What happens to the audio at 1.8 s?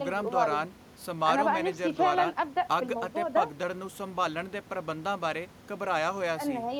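At 1.8 s the speech carries on intact, with only the room noise, about 19 dB below the speech, underneath it.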